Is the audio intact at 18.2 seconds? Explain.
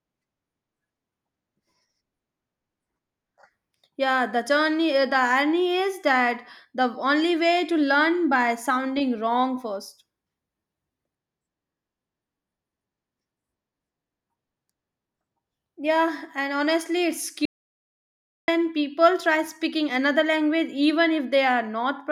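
No. At 18.2 seconds the clip is inside an audio dropout to silence running from 17.45 to 18.48 s. The speech cuts off to silence, with no room tone, for about 1.03 s, likely because the input was lost while recording continued.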